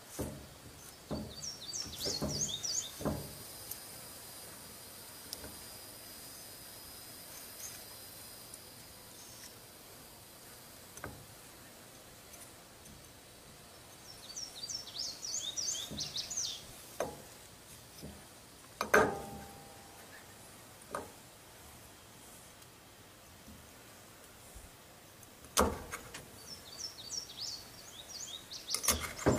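Compressed frames are skipped at 26.15 to 26.21 s and again at 28.80 to 28.85 s. Each time the audio lurches forward by about a tenth of a second, a couple of 46.4 ms frames that went missing or were rejected.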